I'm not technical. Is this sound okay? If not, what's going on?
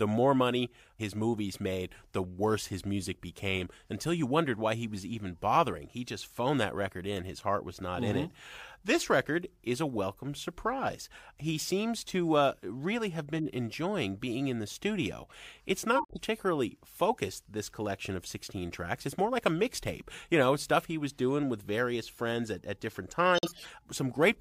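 No. The recording has two kinds of damage from data getting scrambled on its way through the system.

The first is a corrupt frame decoded. A small packet of the compressed audio had some of its data flipped, and the player played it anyway. Misread data puts sound where it doesn't belong, so at 13.37 to 13.47 s, right after "to uh really have" and before "enjoying being in the", you hear a brief chirpy, noisy blip lasting about a tenth of a second.

The second is a corrupt frame muted. Here the damaged packets were rejected and the player filled the gaps with silence, keeping the timing intact. The sound cuts out abruptly from 15.96 to 16.19 s, about a quarter of a second, and again from 23.35 to 23.67 s, about a third of a second, just after "at at different times". Each gap is a run of several packets dropped together.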